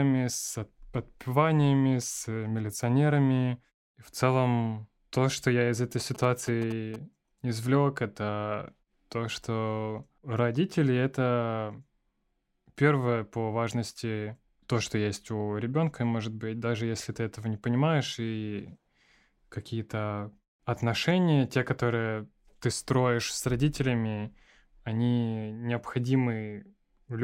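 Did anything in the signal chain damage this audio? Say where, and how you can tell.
Yes. GSM signalling bursts hit the analogue wiring from 6.0 to 6.96 s, after "что я из этой". A galloping dit-dit-dit of short 217 Hz buzzes, well below the speech, means rectified phone radio pulses.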